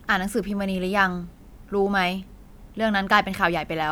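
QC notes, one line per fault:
No faults turned up on this one, so there's nothing to log for it.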